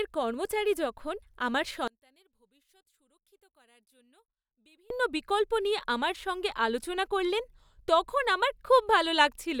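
A speech clip in which the voice collapses from 1.88 s to 4.90 s, between "কর্মচারী যখন আমার" and "বিকল্প নিয়ে আমার সঙ্গে", dropping by about 34 dB to a faint residue before returning at full level. The likely cause is one channel inverted: with one stereo side in reversed polarity, the centred voice is identical in both channels and cancels when they are summed to mono, leaving only their small difference.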